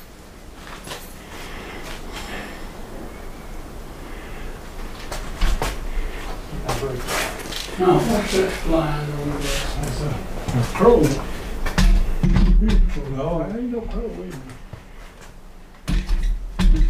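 From 7.42 s to 10.11 s the audio takes on a channel delay (doubling): one channel arrives 40 ms behind the other, and once the two are folded to mono the late copy sits beside the original at the same level. The result is a distinct doubled, slapped repeat of every onset. What separates it from comb-filter colouring caused by a small offset is that 40 ms is long enough to register as a separate event. Unlike reverb, there is one equal-level repeat rather than a decaying tail.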